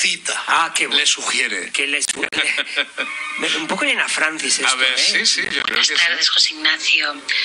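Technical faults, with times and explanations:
Throughout: MP2 compression. Sound is dull and gurgling, with upper bands dropping out and coarse grain. This likely comes from MP2 coding at a rate like 80 kbps.
0.49 to 0.92 s: DAB burbling. Short blips of noise appear in single sub-bands across 17 frames. Bit errors slipped past error correction into the MP2 audio data.
2.05 to 2.38 s and 5.45 to 5.76 s: processor overload crackle. Gritty tearing rides on the sound. Many short buffers, around 10 ms each, missed their deadlines and left silent gaps.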